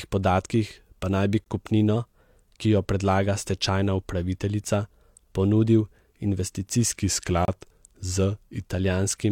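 At 1.44 s, just after "podatkih pa naj bi", a gap between stream segments occurs. The time stamps of two consecutive segments fail to meet, and the player pads the join with silence. The result is a hard-edged dropout of about 18 ms that cuts into the speech without losing any of it. A second gap at 7.45 to 7.48 s lasts 29 ms. It falls 6 s after the first, which fits segments 6 s long.

Between 1.96 and 2.62 s, following "pa naj bi kupnino" and ending before "ki jo predlaga stečajna", the speech suddenly runs about 6% fast and sits a full semitone sharp before snapping back. Speed and pitch rise together, so the likely cause is a drift correction step, where clock-matching software jumps the playback rate to drain its buffer. From 6.99 to 8.71 s the reverse happens: the rate drops by about 6% and the pitch falls by roughly 106 cents, consistent with a step taken to refill the buffer.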